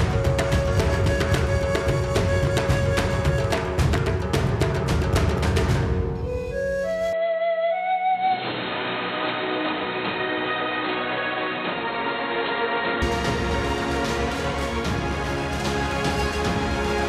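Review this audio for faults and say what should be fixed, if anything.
Electrical switching spike at 3.98 s: a single sharp snap sits on top of the sound, likely an arc from a nearby switch or motor coupling into the audio line.

Input switched to a poorer device from 7.13 to 13.02 s: the sound abruptly turns dull, with nothing above 4.2 kHz and a faint new noise floor. The cause is likely a change to a narrower-band microphone or headset profile. The level holds steady and there is no gap at either transition.

To prevent these, lock the recording input to the intended microphone, and keep audio cabling and equipment away from switches, motors and other sources of electrical interference.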